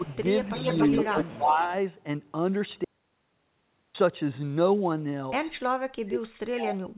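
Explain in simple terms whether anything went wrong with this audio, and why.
Speech suppressed in double talk shows up four times: brief dips at 0.00–0.08 s and 0.44–0.53 s, a longer one from 1.13 to 1.7 s, and a deep one from 5.65 to 6.96 s where the voice nearly vanishes. The likely cause is an echo canceller that, with both sides talking at once, turned everything down.

An echo leak is heard twice: a faint delayed copy of the voice from 0.06 to 0.17 s, about a quarter second behind, then a much more noticeable one from 0.45 to 1.38 s, trailing by roughly 0.28 s. This points to a speakerphone whose echo canceller let part of its own playback back into the call.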